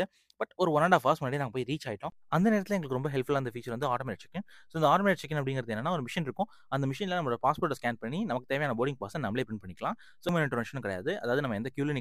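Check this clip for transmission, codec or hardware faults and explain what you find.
One fault: damaged data in a compressed stream at 10.29 s. Corrupted frames make the decoder lose sync and resync, giving a brief glitch.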